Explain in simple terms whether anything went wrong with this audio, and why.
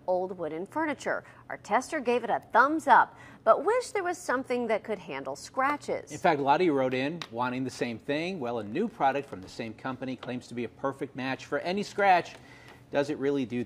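Listening carefully, nothing in this recording stood out as having gone wrong.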